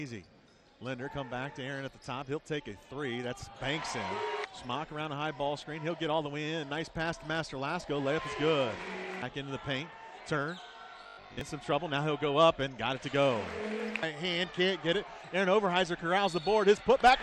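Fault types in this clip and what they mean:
Robotic sound from repeated short buffers: from 11.03 to 11.41 s the sound becomes a rigid metallic buzz at 50 Hz, likely from late audio, with about half replaced by a repeated 20 ms slice. The waveform shows identical copies; the spectrogram shows evenly spaced 50 Hz harmonics.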